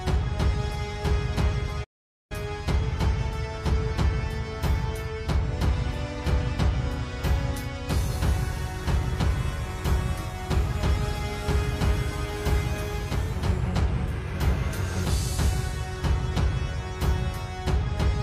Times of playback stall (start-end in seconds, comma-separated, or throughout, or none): 1.83-2.32